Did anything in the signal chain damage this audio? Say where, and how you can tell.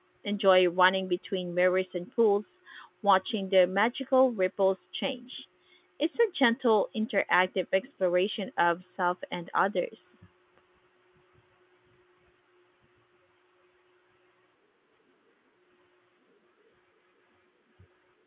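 No, nothing in the chain damaged this speech recording. It went through A-law G.711 telephone coding, which caps the bandwidth at 4 kHz and leaves a faint hiss that rises and falls with the level, about 38 dB down, as that stage normally does.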